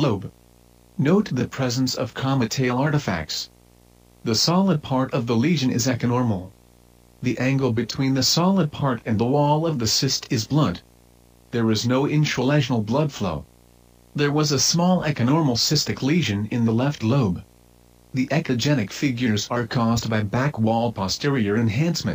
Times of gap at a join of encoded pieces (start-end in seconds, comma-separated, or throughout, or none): none